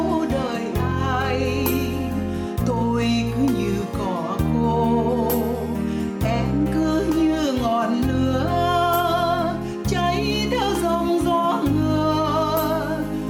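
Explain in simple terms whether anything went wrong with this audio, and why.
Gain pumping runs from start to end: loud and soft parts end up closer in level and the sound is squashed, likely from gain set too high with a fast limiter.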